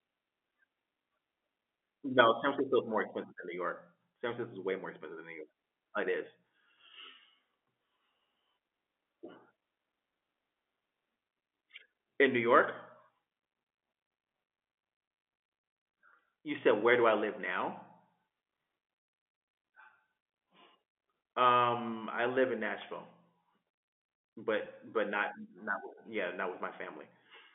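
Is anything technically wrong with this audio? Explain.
Yes. At 24.65 s there is packet loss with pitch repetition. About 10 ms of speech went missing, which fits a single lost packet, and the receiver bridged it by repeating the last pitch period, giving a brief buzzy hold. A waveform shows a few identical repeated cycles, and a spectrogram shows a short, unnaturally steady harmonic stripe. The G.711 telephone coding, which limits the sound to roughly 250 Hz to 3.5 kHz, is not a fault.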